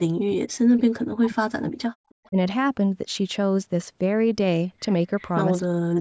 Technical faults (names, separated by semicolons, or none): speech suppressed in double talk; echo leak